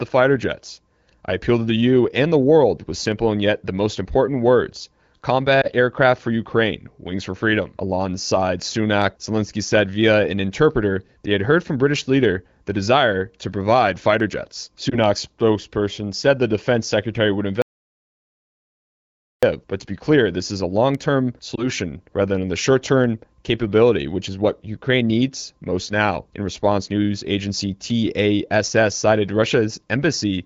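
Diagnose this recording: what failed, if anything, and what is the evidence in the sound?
Lost AMR speech frames, at the network and radio stage. Single 20 ms frames failed at 5.61 s, just before "aircraft for", and at 14.9 s, between "to provide fighter jets" and "spokesperson said the defense". The third was at 21.55 s, before "rather than the". Each gives a brief dip or warble. The AMR-WB decoder reused the last good pitch and vocal tract settings with falling gain. Speech then resumes weak or rough for a moment. The AMR-WB codec itself runs at 15.85 kbit/s with light damage.

Audio dropout to silence, at the input or capture stage. From 17.62 to 19.43 s, about 1.8 s, the sound cuts out completely. No room tone remains. The recorder kept writing silence, likely after losing its input through a disconnected device, a failed link or a stray mute. Whatever occurred in that gap is gone.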